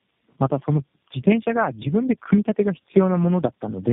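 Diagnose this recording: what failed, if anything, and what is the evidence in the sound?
Tandem speech coding, a fault in the codec stage where the call crosses network borders, runs through the whole clip. The speech is rough, muffled and warbly throughout, with nothing above 3.6 kHz. That degradation is heavier than one narrowband coder produces and fits about three low-rate speech codecs in a row, each re-encoding the previous one's output. A single low-bitrate codec would give the same band limit but not this stacked roughness and warble.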